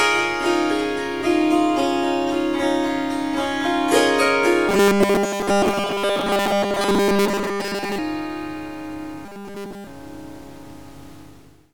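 From 4.69 to 7.99 s, and again from 9.26 to 9.87 s, the sound turns into a rigid metallic buzz at 200 Hz, most of the first stretch and all of the second. This is robotic sound from repeated short buffers, likely one 5 ms block looped while fresh audio failed to arrive.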